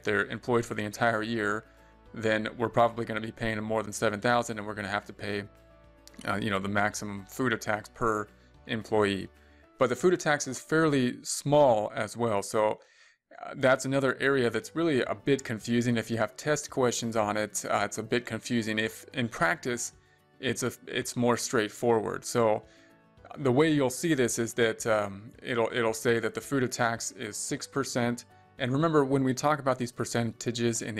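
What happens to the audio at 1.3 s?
Nothing goes wrong at 1.3 s, and the audio plays through that moment intact.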